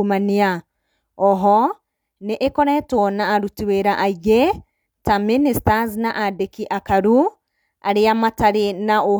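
No technical faults can be heard anywhere in the speech recording. There is no moment in it that needs a time or a value noted.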